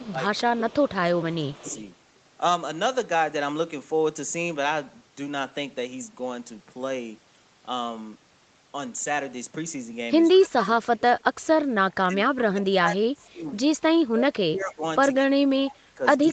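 From 0.0 to 1.64 s the talker's level dips by as much as about 15 dB across roughly 0.7 s. This is speech suppressed in double talk, likely from an echo canceller that heard far-end audio on the loudspeaker at the same time as this talker and turned both down. The same fault returns, deeper, at 10.33 to 11.49 s (about 20 dB), 11.93 to 13.43 s, 13.94 to 14.83 s and from 15.26 s to the end (each about 25 dB). It is the talker's own voice that sags or breaks up, not an added sound.

Over 0.0 to 1.81 s a second, faint copy of a voice trails the original by 180 ms, about 25 dB down. This is echo leak, likely residual loudspeaker pickup that the canceller failed to remove and sent back. Brief scraps of it recur at 10.44 to 10.48 s and at 15.16 to 15.22 s. Unlike suppression, nothing is lost here. Instead, a delayed duplicate is laid over the audio, and nothing is heard above 8 kHz.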